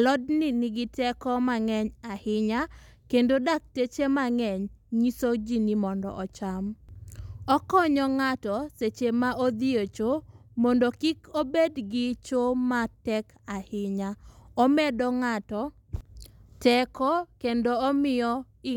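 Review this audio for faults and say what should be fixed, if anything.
No faults turn up in this audio, so nothing needs to be fixed.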